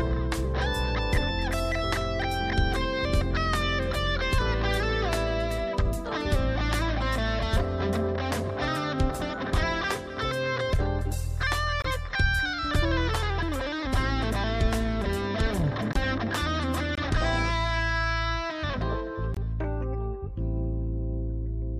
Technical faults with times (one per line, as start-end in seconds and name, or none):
11.82-11.90 corrupt frame muted
15.93-15.97 corrupt frame muted
16.95-16.99 corrupt frame muted
19.34-19.38 corrupt frame muted